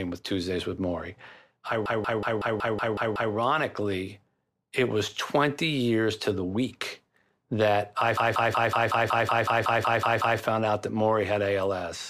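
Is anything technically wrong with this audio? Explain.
Yes. A system hang loop occurs at 1.86 to 3.34 s and again at 8.17 to 10.40 s. The playback stalled while the hardware kept replaying one 186 ms buffer, consistent with 8192 samples, producing a stutter at about 5.4 Hz.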